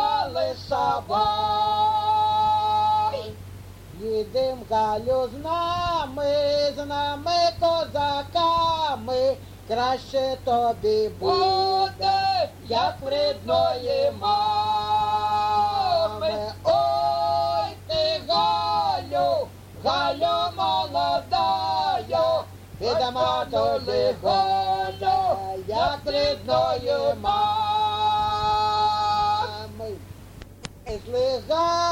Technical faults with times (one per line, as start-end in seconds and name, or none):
none